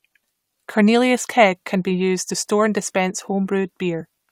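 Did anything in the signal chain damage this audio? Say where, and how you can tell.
Yes. Compressed frames skipped at 2.29 to 2.31 s, a codec-stage fault: the speech jumps forward by about 20 ms where frames were missing or rejected by the decoder.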